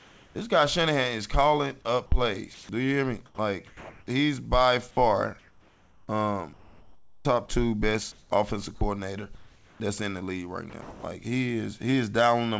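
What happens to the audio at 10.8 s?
Between 10.70 and 11.03 s the sound turns choppy: about 240 ms of it drops out and is replaced by synthetic noise. This is likely sound chopped by the voice detector. The sender judged the passage inactive, stopped transmitting, and the receiver filled the gap with generated comfort noise. As with everything passing through this call link, the fill carries nothing above 8 kHz.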